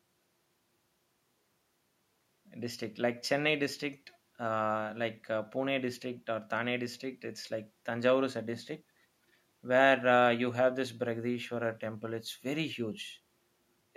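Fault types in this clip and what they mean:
No technical faults can be heard in this speech recording. There is nothing to list for any kind of fault.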